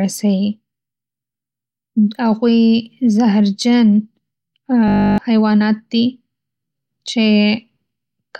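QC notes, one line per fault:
4.88–5.18 s, system hang loop: a stalled driver left the hardware replaying one 20 ms buffer, giving a steady 50 Hz buzz and losing about a third of a second of speech.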